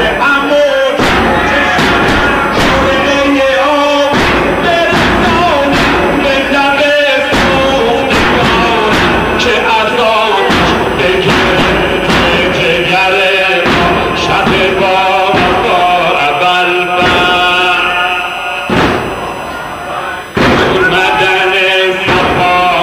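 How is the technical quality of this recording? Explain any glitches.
The recording carries a steady tonal contamination from start to finish. USB whine runs throughout: current drawn in 1 ms bus frames leaks through power or ground, producing a fixed 1 kHz tone, strongest at 2 kHz, roughly 30 dB below the sound.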